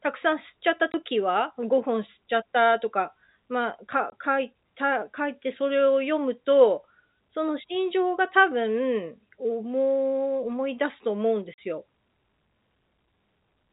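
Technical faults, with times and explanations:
0.92–0.94 s, 4.10–4.12 s, 11.54–11.58 s: packet loss filled with silence. Audio went missing and the receiver played silence instead, leaving 20, 20 and 40 ms holes in the speech, which fits one, one and two lost 20 ms packets. The holes have hard edges.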